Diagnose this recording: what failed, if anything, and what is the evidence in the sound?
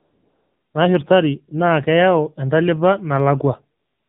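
Throughout, the speech is dull and boxed-in, with nothing above 4 kHz, and the voice has a buzzy, synthetic edge. This is the AMR narrowband mobile codec at the codec stage; the coarse pulse excitation driving the vocal tract model fits a low mode around 7.4 kbps.

From 0 to 0.74 s and again from 3.80 s to the end, the real background gives way to a smooth, steady hiss that switches in abruptly. This is AMR comfort noise: silence detection halted speech frames, and the receiver synthesised noise from a rough level-and-spectrum description.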